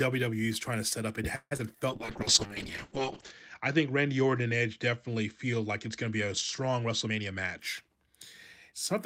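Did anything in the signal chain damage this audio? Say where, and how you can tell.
Yes. A call audio freeze sits at 1.35–1.53 s, just after "to set up it". The last sound is stretched for about 156 ms, with 30 ms of silence, then resumes intact. This is likely a network stall that drained the jitter buffer.

Short concealed packet loss follows at 1.57–1.61 s. About 40 ms of audio never arrived and was patched with a brief synthetic continuation, heard as a quick smear before the real signal returns.

A call bitrate drop at the codec stage runs from 1.91 to 7.65 s. The rate falls from 32 to 7 kbps and bandwidth shrinks from 20 kHz to 8 kHz, so the audio turns muffled and coarse, bottoming out for 1.38 s.

A jitter buffer speed-up runs at 7.06–8.14 s. The receiver trimmed roughly 150 ms of pitch periods to shed excess delay, so the speech plays at 112% speed with unchanged pitch.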